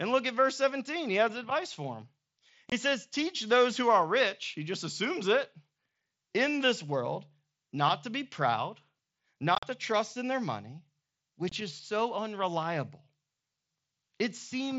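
Unconcealed Bluetooth headset packet loss at 2.70–2.72, 9.55–9.63 and 11.49–11.52 s leaves hard-edged silent gaps where headset-to-phone packets vanished; the middle burst chops the speech repeatedly.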